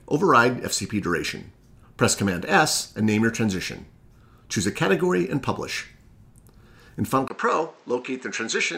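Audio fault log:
7.28–8.78 s, input switched to a poorer device: the recording input likely changed mid-take to a lesser microphone or a headset's call profile. A gap of about 20 ms marks the switch. After it, nothing reaches above 8.3 kHz, so the sound turns duller and boxier, drops by about 5 dB, and gains a faint new background noise sitting well beneath it. That device's own narrower band, tone and noise floor carry through to the end.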